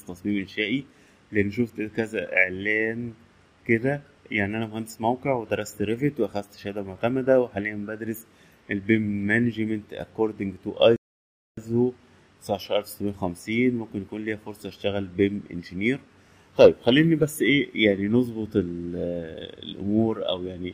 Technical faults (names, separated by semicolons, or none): rebuffering stall